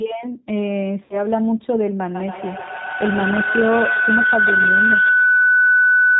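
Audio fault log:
Throughout: G.729 codec. Audio is confined below 4 kHz and has a rough, synthetic, plainly audible character, consistent with G.729A at about 8 kbit/s rebuilding each 10 ms frame from a vocal tract filter, pitch predictor and a few pulses.
1.04–1.26 s: VoIP packet loss concealed by the speech codec. About 60 ms of audio is missing, which fits two lost packets. The decoder stretches its last pitch and filter into a fading buzzy tone or coloured noise, and the sound stays weak and distorted briefly after packets resume.
2.15 s to end: feedback howl. A tone around 1.5 kHz builds over a loop delay of roughly 150 ms, peaking about 4 dB above the speech. A microphone-to-loudspeaker loop in the same room is gaining level on each trip and narrowing to its favoured frequency.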